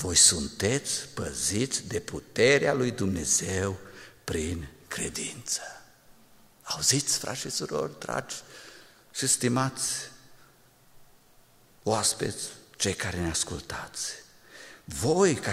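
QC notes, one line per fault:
0.10–15.52 s, clock slip clicks: a fast, faint rattle of ticks repeating about every 40 ms, some hundreds across the clip. Each is a single sample dropped or repeated, likely from two unsynchronised clocks drifting apart by around 500 ppm. On a spectrogram they appear as evenly spaced thin vertical lines, plainest in loud, bright passages. On the waveform each shows as a tiny one-sample step in an otherwise smooth cycle.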